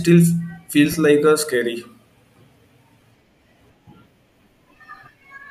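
Lost LE Audio frames at 0.92–0.94 s, 3.01 s and 5.19–5.21 s (20, 10 and 20 ms) made the decoder repeat the last spectrum with randomised signs, briefly smearing the speech into noisy texture.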